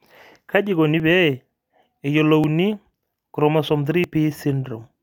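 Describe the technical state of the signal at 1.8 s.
At 1.8 s the signal is intact, with no dropout, distortion, glitch or other technical fault to be heard at that point.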